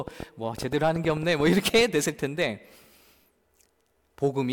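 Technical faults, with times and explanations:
0.08 to 1.82 s: train of clicks. Roughly fifteen similar ticks ride over the speech at an uneven pace, near 8.7 per second. They peak about 10 dB above the signal, so they stand out. The likely cause is interference from nearby equipment or a faulty connection or power supply.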